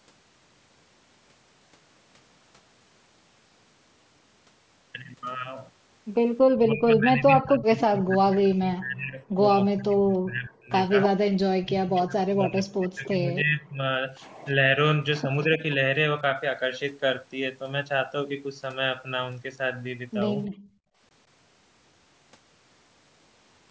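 A speech recording on a call path, with three kinds of echo-canceller trouble. Speech suppressed in double talk shows up from 6.5 to 11.12 s and from 11.57 to 13.85 s: the voice sinks by roughly 30 to 35 dB for several seconds in total. A shallow dip of a few dB follows at 15.22 to 15.62 s. This is likely the canceller ducking the near talker while the far side was also speaking. Echo leak appears as delayed copies of the voice, about 290 ms behind, at 11.03 to 11.09 s, 15.42 to 15.74 s and 20.43 s. These are likely loudspeaker pickup that the canceller did not fully remove, and they range from about 10 dB down to about 30 dB under the speech. Background gated by the echo canceller follows at 20.48 to 20.99 s, where the room sound drops by about 29 dB for half a second while the canceller clamps the microphone, then comes back. Nothing above 8 kHz comes through the call's microphone processing.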